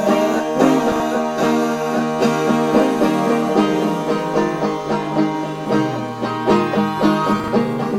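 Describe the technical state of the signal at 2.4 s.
At 2.4 s the music plays through intact, with no dropout, distortion, glitch or other fault in the signal at that moment.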